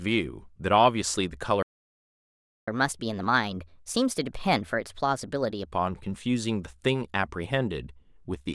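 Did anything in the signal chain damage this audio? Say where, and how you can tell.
Yes. At 1.62 s the speech cuts out in mid-flow and the output stays silent until 2.68 s, a gap of about 1.05 s, after which the sound resumes. This is a playback stall at the playback stage. The silence is abrupt rather than faded, which points to the player having nothing to send out. The likely cause is that its buffer ran dry or its output thread was blocked for that second.

Straight after the gap, from 2.68 s to 5.68 s, the speech runs noticeably fast and sounds raised in pitch, by roughly four semitones, before dropping back to normal. This is catch-up at higher speed, also at the playback stage. To win back the lost time, the player resamples its backlog at 1.25 times normal speed. Because resampling stretches pitch along with tempo, both rise together for those three seconds.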